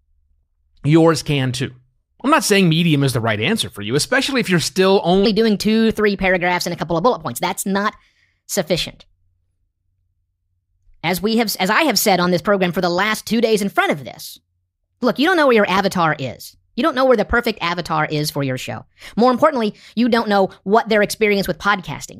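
From 5.25 s to the end, a section at the wrong speed, likely from the audio being played against a faster clock than it was recorded with. Right after "especially if you're still", the speech runs 1.24 times faster and jumps about four semitones higher, sounding hurried and thin.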